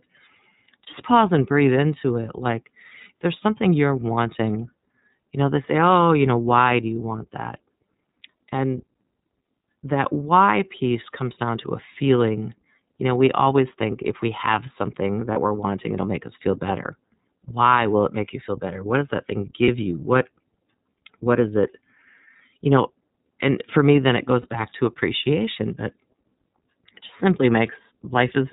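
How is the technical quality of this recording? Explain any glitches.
The recording has a clear codec character all the way through, plus four short dropouts.

The whole clip runs through the iLBC codec, and the damage is plainly audible. It's narrowband, so nothing above 4 kHz survives, and the speech comes across muffled at the top and a bit rough and synthetic. That's the codec rebuilding each frame's excitation from scratch rather than carrying detail over from the previous one. The texture fits iLBC's 13.33 kbps mode with its 30 ms frames.

There are lost iLBC frames at 0.84, 15.33, 19.64 and 24.42 s, each about 30 ms, which is one frame's worth. A packet went missing each time, and the decoder patched the hole by repeating the last pitch cycle blended with noise. You hear a brief held, slightly buzzy vowel smear. Because iLBC frames stand alone, the speech snaps straight back to normal right after each one.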